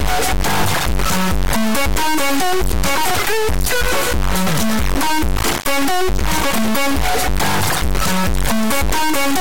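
From start to end, integer samples are being read as floating-point values, consistent with 32-bit integer data decoded as 32-bit float. Output slams between silence and the clipping limit, a harsh square-wave buzz. Unlike ordinary clipping, quiet stretches collapse to dead silence rather than passing through unchanged.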